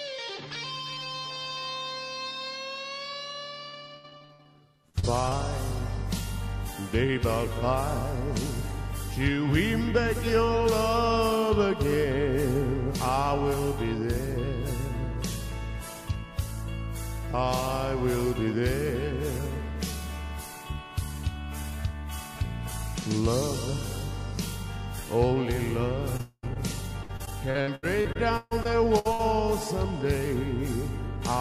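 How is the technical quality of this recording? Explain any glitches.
Two stretches are damaged by repeated packet loss, and one short dropout sits inside the second stretch.

From 3.69 to 5.33 s there is repeated packet loss with a robotic sound. Ten short holes appear, the longest about 67 ms, and together they cover about 23% of that span, roughly 0.38 s of missing audio. The receiver fills each hole by extending the last received sound, and the next hole arrives soon after. The result is choppy, robotic-sounding audio with fragments missing.

The same fault returns from 26.17 to 29.21 s and is heavier. There are eighteen holes, the longest about 140 ms, covering about 22% of the span and roughly 0.66 s of audio. Because there are more gaps and the longest is longer, the repeated patching gives a sustained robotic, stuttering texture.

At 26.21 to 26.45 s, inside that second stretch, the sound briefly turns into a continued buzz or hiss that fades, followed by a moment of near silence of about 30 ms. 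The audio then resumes with about 0.22 s missing. This is likely a long network dropout, where nothing arrived for that interval and the receiver stretched the last sound until it had nothing left to extend.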